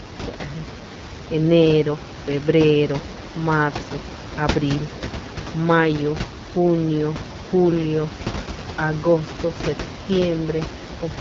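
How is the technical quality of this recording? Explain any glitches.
The recording's technical quality is limited by plainly audible AMR wideband (HD Voice) codec damage running through the whole clip. Room noise sits about 10 dB below the speech.

From start to finish the speech sounds rough and raspy, with nothing above 7.2 kHz. The codec rebuilds speech from a pulse-driven vocal tract model, and at this low rate, which fits the 8.85 kbit/s mode, too few pulses survive, giving that grainy, buzzy texture.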